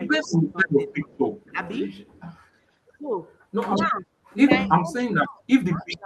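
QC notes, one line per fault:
0.0–0.78 s, 1.52–1.59 s, 3.86–4.07 s and 4.67 s to the end: speech suppressed in double talk. The talker's level dips by about 10 dB early and up to about 20 dB at the end, likely because the echo canceller ducked its own talker while the far side spoke. The direct voice loses level; nothing is repeated.
0.25–0.31 s, 0.91–2.21 s and 5.8 s: echo leak. A faint delayed copy of the speech, about 30 to 35 dB below it and trailing by 263 ms, likely slipped past a loudspeaker-side echo canceller. Unlike suppression, this adds a late duplicate rather than removing level.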